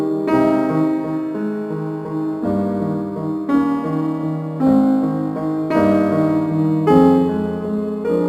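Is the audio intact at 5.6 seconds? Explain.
No, at 5.6 seconds you're hearing the crude rate conversion that runs through the whole music clip. Samples were repeated to stretch the rate, which fits a 44.1 kHz to 48 kHz change, and that leaves a gritty, inharmonic fizz roughly 35 dB down, riding loud, bright passages.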